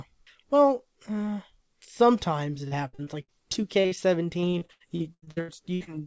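Just after "well uh sometimes it", from 2.68 to 3.98 s and again from 4.40 to 5.89 s, repeated packet loss breaks the speech into choppy, robotic fragments. Holes up to 79 ms are patched by extending prior sound, concealing a quarter, then over a third, of each stretch. The G.722 call path caps the band at 8 kHz.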